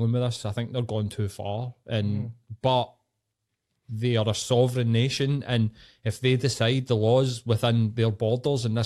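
No technical faults are audible.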